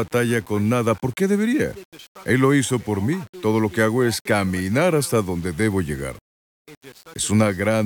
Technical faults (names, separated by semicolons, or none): low bit depth without dither